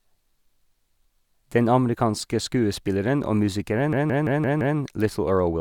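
At 3.93 s, right after "amerikanske skuespilleren og", the speech locks into a system hang loop until 4.78 s. The computer or driver stalled while the sound hardware kept replaying its ring buffer. One 171 ms slice repeats exactly, five times, at about 5.9 Hz. That length fits an 8192-sample buffer. The result is a stuttering, machine-gun judder. Essentially nothing seems to be lost. The speech resumes where it stopped.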